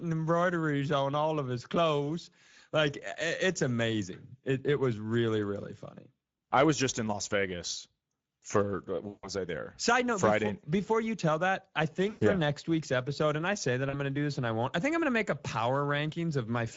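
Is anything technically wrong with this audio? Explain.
Yes. Throughout, the speech sounds hoarse and grainy, with a rough edge and a hissy top end rather than clear high frequencies. That is Speex codec damage, and it is plainly audible. This CELP codec models the voice as a filter driven by a coded excitation, and at a mid-rate setting, which fits roughly 17 kbps, too few bits go to that excitation, leaving noisy voicing and a synthetic fill above 4 kHz.

There are also three dropouts showing VoIP packet loss concealed by the speech codec. At 9.07 to 9.29 s, after "for uh" and before "I there", about 160 ms of sound is stretched out and fades. At 12.09 to 12.23 s, between "you tell that I" and "yeah next week's episode", a 120 ms gap does the same. At 13.89 to 13.95 s, after "and I say that", a shorter 40 ms blip precedes "going to do this". In each case the decoder kept repeating its last pitch and filter with falling gain, and the voice sounds weak for a moment after the packets return.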